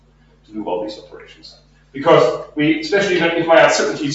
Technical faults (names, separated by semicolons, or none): noise suppressor applied to music or sounds; sound cut by the noise suppressor